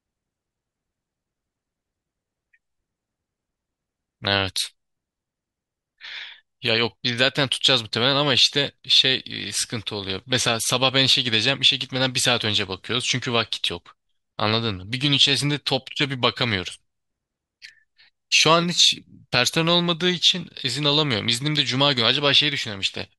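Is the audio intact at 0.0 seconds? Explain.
Yes, the audio is intact at 0.0 seconds, with no fault present at that moment.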